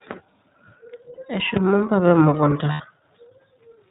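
The whole clip has the narrowband sound of the iLBC codec. Nothing above 4 kHz comes through, so sibilants lose their sparkle, and the speech has a slightly rough, synthetic edge that's easy to hear. The codec builds each short frame's excitation independently, and the texture fits the 20 ms frame, 15.2 kbps mode. That coding is where the buzzy graininess comes from.

The first lost iLBC frames come at 1.14 s and cover about 40 ms, to 1.19 s. When packets go missing, the decoder fills the hole by repeating the last pitch cycle with some noise mixed in, so you get a brief held, slightly buzzy vowel-like smear instead of a dropout. Because each frame stands alone, the sound snaps back almost immediately afterwards.

At 1.57 s there's a single loud pop, a sharp click lasting about 20 ms and peaking something like 15 dB above the speech. The speech carries on underneath it. It's a sudden voltage step or pulse landing on the signal, likely from a plug, switch, static discharge or driver glitch, with the following circuitry shaping it into that crack.

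The second lost iLBC frames run from 2.72 s to 2.82 s, about 80 ms. That's long enough that the concealment's repeated pitch cycle fades over the gap. The sound recovers right away once real frames arrive again.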